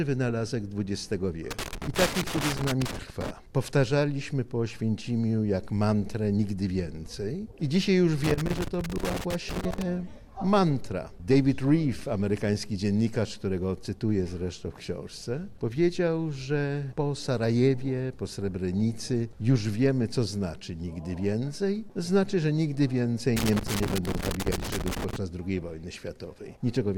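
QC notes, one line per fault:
1.51–3.31 s, 8.24–9.82 s and 23.36–25.16 s: loose connector crackle, three irregular bursts of scratchy crackle lasting about 1.6 to 1.8 s each. A worn or dirty contact is rapidly making and breaking, chopping the signal, and any DC on the line adds pops.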